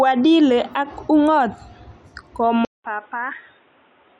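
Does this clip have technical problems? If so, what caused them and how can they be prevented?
Yes. At 2.65 s the speech goes dead for about 0.19 s, then comes back boxy, roughly 10 dB quieter, with a new noise floor around 35 dB below it and nothing above 3.8 kHz, through to the end. That's the signature of the input switched to a poorer device, likely a headset dropping into its narrowband call profile. To prevent it, pin the recording input in the system settings and disable automatic device switching.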